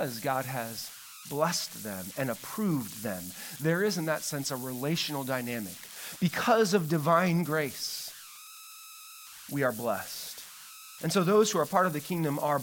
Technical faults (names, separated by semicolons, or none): converter idle tones